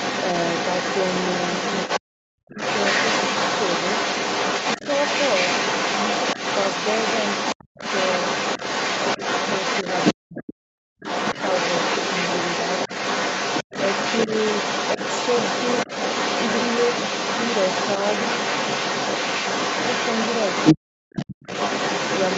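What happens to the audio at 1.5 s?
At 1.5 s, a second voice is leaking through from the other side. It runs from the start to 2.0 s, about as loud as the main speech. It likely comes from the talker's loudspeaker playing the far end, which the echo canceller failed to remove.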